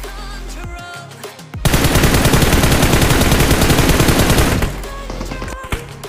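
Nothing in the clip gives a listener anything to flag; there's no break, glitch or odd artefact anywhere along the way.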